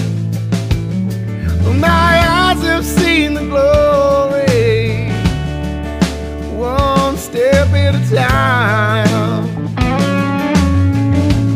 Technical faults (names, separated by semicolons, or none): none